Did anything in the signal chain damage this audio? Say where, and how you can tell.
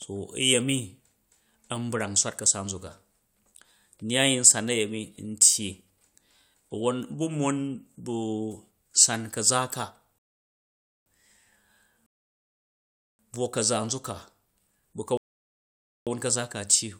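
Yes, at the playback end. There are three rebuffering stalls in this speech: 10.18 to 11.06 s (about 0.88 s), just after "san ka̱za̱ ka"; 12.06 to 13.19 s (about 1.13 s), ending right before "buwo ka̱za nzuk ka"; and 15.17 to 16.07 s (about 0.89 s). Each one is dead silence, and then the speech picks up exactly where it stopped, with nothing skipped. That tells you the player drained its buffer and waited for more data. It's added time, not lost audio.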